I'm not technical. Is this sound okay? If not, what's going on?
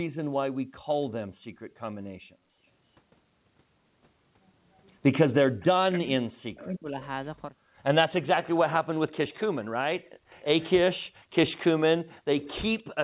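No. Three kinds of call problems can be heard.

Background gated by the echo canceller: from 1.33 to 1.7 s, and again between 10.09 and 11.33 s, the room sound drops away and then returns. The echo canceller shut the microphone down hard while the loudspeaker played. Only the background vanishes. No voice is cut.

Echo leak: a delayed copy of the voice comes back about 0.3 s late, at 2.82 to 2.96 s, 5.6 to 5.98 s, 7.03 to 7.28 s, 9.12 to 10.7 s and 11.63 s to the end. It is well below the main voice and loudest in the last stretch. Likely the canceller missed part of what the loudspeaker played. Unlike the drops, this adds sound rather than removing it.

Speech suppressed in double talk: from 5.97 to 6.99 s, for about a second, the voice itself is turned down, right as an echo stretch ends. Both sides were likely sounding at once, so the canceller lowered everything, talker included. That is what separates it from the background dips.

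The dull, phone-like tone, with nothing above 4 kHz, comes from the call codec and is normal.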